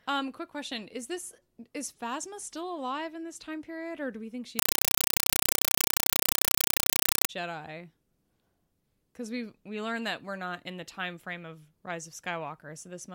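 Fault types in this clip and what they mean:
Compressed stream played as audio: from 4.59 to 7.29 s, after "or do we think", undecoded data, apparently AC-3, replaces speech with loud static: 5.33 ms bursts, 31.25 per second.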